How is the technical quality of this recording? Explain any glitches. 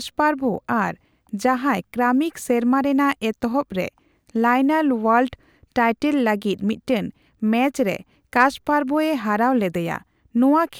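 No technical glitches can be heard in this speech recording. There is nothing here that needs explaining.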